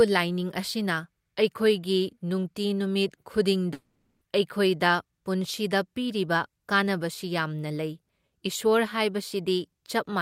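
From 3.73 to 4.23 s the speech stops and becomes a fading buzz, then near-silence, resuming with about 0.48 s missing, likely a long network dropout.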